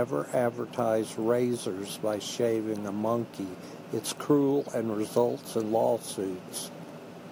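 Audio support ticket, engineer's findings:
Crude rate conversion, whole clip. Gritty inharmonic fizz riding the speech, strongest on loud and sibilant passages, error sitting roughly 25 dB under the signal. Probable component: resampler using nearest-sample repeats, which fits a 32 kHz to 48 kHz step. Waveform: stair-stepped, with every third sample doubled. Spectrogram: mirrored image energy above 16 kHz plus unrelated tones shadowing each formant.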